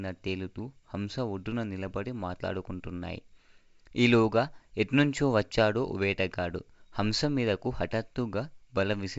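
This speech recording carries no technical faults; it has passed through G.722 wideband telephone coding at 64 kbit/s, which leaves the sound band-limited with nothing above about 7.8 kHz and any coding damage faint at most.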